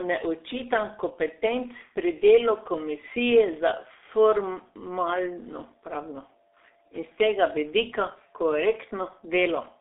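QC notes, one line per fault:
throughout, G.723.1 codec: the speech passes through a low-rate telephony coder, at what sounds like roughly 6 kbit/s, restricted to a 300 Hz to 3.7 kHz band. Its slow, coarse voice model leaves the speech heavily muffled and hoarse, with smeared consonants.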